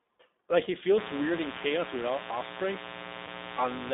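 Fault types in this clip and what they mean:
iLBC codec: The whole clip passes through a narrowband VoIP codec that codes each 20 ms frame on its own. Only about 250 Hz to 3.7 kHz gets through. The speech sounds plainly rough and synthetic, which fits iLBC's 15.2 kbps mode.
Lost iLBC frames: Packets went missing, and the decoder filled each gap by repeating the last pitch cycle mixed with noise. This sounds like a brief held, buzzy vowel. It happens at 0.64 to 0.70 s for 40 ms and at 3.26 to 3.29 s for 20 ms. The speech recovers almost at once.
Mains buzz: From 0.95 s to the end, a steady, raspy 60 Hz buzz sits under the speech, roughly 10 dB below it. Sharp switching spikes twice per mains cycle fill it with harmonics reaching up into the kHz range.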